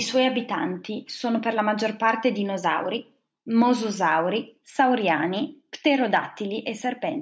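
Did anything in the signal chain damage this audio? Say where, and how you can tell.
Yes: hard clipping at a gain or conversion stage, where speech peaks drove about 2 dB past the converter's or number format's full-scale limit. It shows as a brief tick at 3.62 s, then crackle on the peaks across the stretch from 4.76 to 5.12 s. In the waveform those peaks are cut flat. The spectrogram shows vertical smears of added harmonics rising toward the 8 kHz top edge left by the call's microphone processing.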